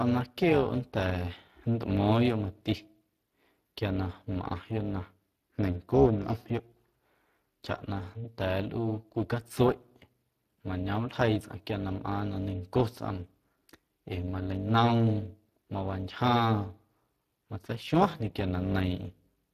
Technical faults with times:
0.00-19.54 overlap-add ripple
0.00-19.54 Speex codec

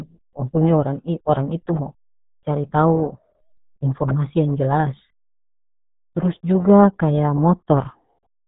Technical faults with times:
0.00-8.48 RealAudio 14.4 codec

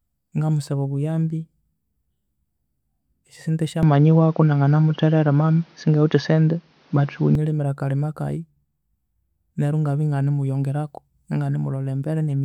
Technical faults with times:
3.83-7.35 input switched to a poorer device

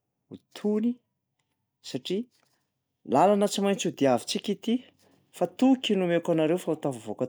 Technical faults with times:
none

